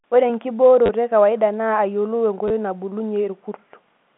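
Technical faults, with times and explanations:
0.86–0.89 s, just before "ekawaida naa", and 2.48–2.50 s, packet loss with last packet repeated: brief robotic stutters with a buzz near 100 Hz. The lost audio, 30 ms and then 20 ms, was filled by replaying the previous packet, which fits 10 ms packets.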